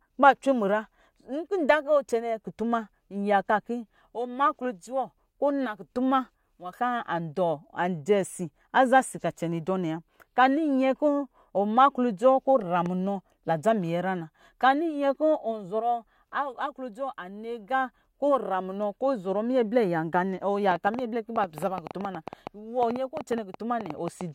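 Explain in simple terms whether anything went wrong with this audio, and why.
Something did go wrong near the end. From about 20.71 s to 24.22 s there's a train of clicks, around 30 sharp ticks at roughly 8.6 per second, coming at an uneven pace rather than a steady beat. They sit on top of the speech and carry on through any gaps, and they stand out clearly above it. That pattern is likely from electrical interference from nearby gear or a faulty connection or power supply.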